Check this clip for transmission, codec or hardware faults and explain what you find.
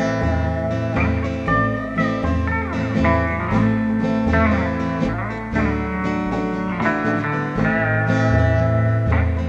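One fault is present. Clock slip clicks from 0.68 to 8.91 s, about every 0.7 s: two unsynchronised clocks, likely drifting roughly 30 ppm apart, each drop or repeat one sample, giving around ten regular ticks in the sound.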